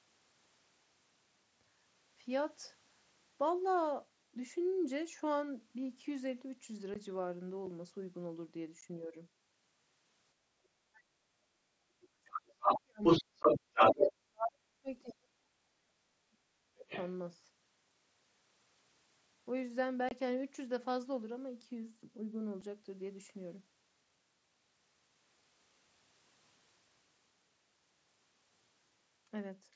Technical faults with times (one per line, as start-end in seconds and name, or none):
6.94 unconcealed Bluetooth headset packet loss
8.81 unconcealed Bluetooth headset packet loss
10.41-11.21 speech suppressed in double talk
11.85-16.89 speech suppressed in double talk
12.37-14.11 other side's voice leaking through
13.43 unconcealed Bluetooth headset packet loss
15.08-15.13 other side's voice leaking through
16.89-17.08 other side's voice leaking through
20.09-20.11 unconcealed Bluetooth headset packet loss
22.61 unconcealed Bluetooth headset packet loss